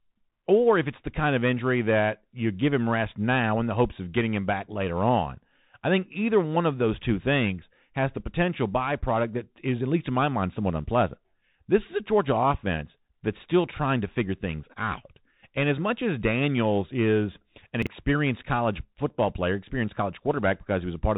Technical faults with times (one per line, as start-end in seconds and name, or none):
0.00-21.17 Bluetooth CVSD headset codec
17.82-17.87 chunks out of order